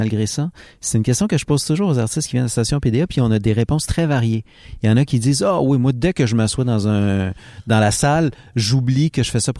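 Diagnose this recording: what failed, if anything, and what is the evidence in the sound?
Nothing failed; no faults can be heard anywhere.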